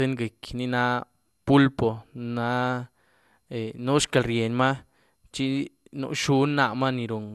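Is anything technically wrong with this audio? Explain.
Yes. Throughout the speech there is generation loss: a swirly, hollow, smeared sound with blurred attacks and nothing above 12.6 kHz. It was likely re-encoded around ten times, fitting MP2 at 128 kbit/s, each pass requantising on a shifted frame grid so noise and spectral holes accumulate.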